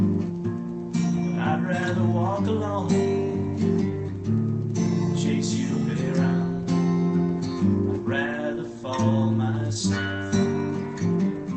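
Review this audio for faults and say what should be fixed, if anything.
No faults found; nothing to fix.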